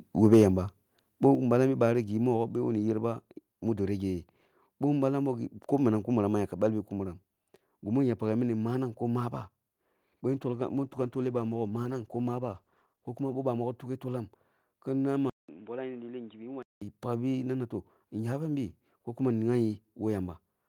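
A speech recording of about 21 s opens with microphone overload from 0.32 to 0.36 s, just before "yamba boh". Peaks run about 3 dB past the converter's limit and a fair share of samples are flattened, giving a harsh crackle that a clean level change would not have. The cause is likely an input gain set too high. Microphone volume stepped down follows at 0.34 s (about 2 dB), 1.35 s after "yamba boh" (about 5 dB) and 2.37 s after "bi bari gi" (about 2 dB). Each is a clean, sudden drop in both voice and background with no added distortion, which separates it from the clipping. It likely comes from automatic gain control lowering the device volume after the overload. A call bitrate drop runs from 10.32 to 13.93 s. The rate falls from 32 to 17 kbps and stays at its lowest for 2.8 s, so the voice turns rough and watery with dulled highs. There is no gap and no change in level or noise floor, and the sound recovers as the encoder is given more bits again. 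Input switched to a poorer device covers 15.30 to 16.82 s. A 190 ms silence comes first, then the sound is abruptly boxy, roughly 10 dB quieter, and carries new background noise about 30 dB below the voice. That gap and the new noise floor set it apart from coding loss.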